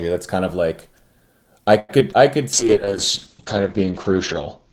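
From 1.79 to 2.16 s, repeated packet loss gives the speech a choppy, robotic quality. Five gaps hit in quick succession, the longest 94 ms. Each is patched by stretching the preceding sound, with about 35% of the span concealed. On a spectrogram, smeared, repetitive harmonic blocks alternate with brief dropouts.

A jitter buffer slow-down follows from 2.37 to 2.91 s. The receiver repeats single pitch periods to rebuild its reserve, adding 39 ms, so the audio plays at 94% speed with unchanged pitch. Vowels sound slightly drawn out, and the waveform shows near-identical cycles repeating in runs.

From 2.55 s to the end, a call bitrate drop makes the speech rough and muffled. The coarser coding suggests a fall from around 32 kbps to 8 kbps, lasting 1.87 s at its lowest. On the spectrogram, energy above 8 kHz vanishes abruptly, leaving a flat ceiling where content previously reached 20 kHz.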